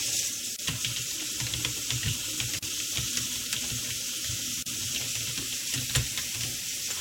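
Short silences cut into the sound at 0.56 s, 2.59 s and 4.63 s, repeating every 2 s. Each is a gap at a join of encoded pieces, lasting 26 to 38 ms. Encoder start delay and end padding were left in. Edges are smeared by the codec.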